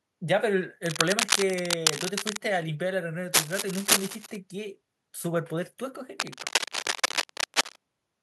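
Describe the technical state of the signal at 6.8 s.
At 6.8 s there is cable scratch noise, running from 6.2 to 7.76 s. Dense, uneven bursts of scratching ride over the speech at about the speech's own level. A worn cable or connector being moved is the likely cause, its contact resistance jumping rapidly.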